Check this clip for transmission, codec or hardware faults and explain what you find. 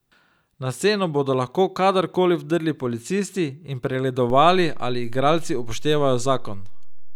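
One hardware fault is present. At 4.30 s there is a DC step. The waveform's zero line suddenly shifts by about -24 dBFS and stays offset to the end. A converter recalibration or a switched-in input with an offset causes this. It sounds like a single low thump while the speech continues unchanged.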